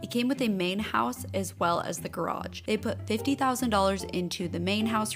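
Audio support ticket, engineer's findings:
No faults found on listening.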